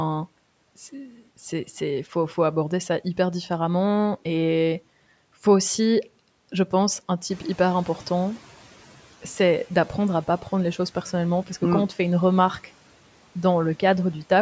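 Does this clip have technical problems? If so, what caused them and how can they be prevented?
Yes. A noise suppressor catching up is audible from 7.29 to 8.58 s. The room noise jumps by about 10 dB around 7.5 s, and the suppressor's noise estimate lags behind that jump, so the louder background passes with less reduction at first. Over roughly 1.3 s the estimate adapts, and the noise sinks by about 8 dB from a level about 23 dB below the speech. Configuring the suppressor with a faster noise-tracking time constant, or keeping sudden noise sources away from the microphone, would prevent this.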